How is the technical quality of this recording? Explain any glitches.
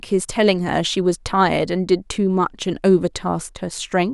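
The technical quality is good, and there are no glitches to explain. The speech carries on without any audible disturbance.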